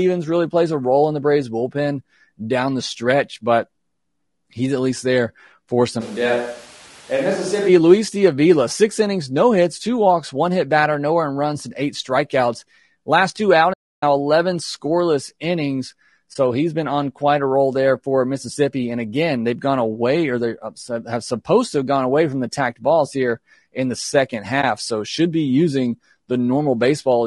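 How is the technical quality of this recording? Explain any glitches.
The speech has audible coding damage throughout, plus three kinds of short glitches.

Low-delay AAC compression runs through the whole clip. The voice sounds rough and grainy, with noise between the harmonics and a thin top band. This is likely AAC-ELD, the short-frame codec of video calls. The damage fits a low rate near 32 kbps.

From 6.02 to 7.68 s there is a switch to a distant microphone. The voice suddenly turns roomy and hollow. It is about 5 dB quieter and loses bass. Room noise sits roughly 25 dB below the speech. The close microphone's signal was likely dropped, then restored.

A playback stall starts at 13.73 s. The sound stops mid-flow and stays silent for about 0.29 s, until 14.03 s. The player likely ran short of data or its thread was blocked.

AAC frame loss with muting hits at 16.33 s and again at 24.61 s. 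Each is a brief 20 ms dip, which fits one lost frame. The decoder zeroed that frame's spectrum, so the overlapping windows fade the sound out and back in.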